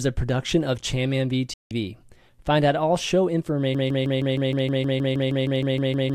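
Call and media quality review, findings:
Digital broadcast dropout, 1.54 to 1.71 s: speech mutes abruptly, roughly 3 ms fade, about 170 ms lost, consistent with several corrupt frames discarded by the receiver. Waveform shows flat gap; spectrogram shows full-band blank column.

Broken-record loop, 3.75 s to end: a 157 ms speech fragment repeats back to back, about 15 times. Likely cause is a stalled player or stream resending its last buffer. Waveform shows an identical repeating block; spectrogram shows periodic, tiled pattern.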